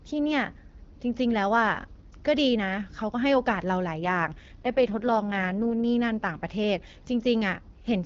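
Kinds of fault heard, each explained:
AMR rate drop: from about 4.01 s to 5.84 s the speech turns rougher and more synthetic, with a raspy, buzzy edge, while the bandwidth stays just as wide and nothing drops out. That's the network telling the codec to spend fewer bits on the speech itself and more on error protection over a shaky radio link. The sound fits AMR-WB stepping down from 12.65 to around 6.6 kbit/s, and it clears up once the rate comes back.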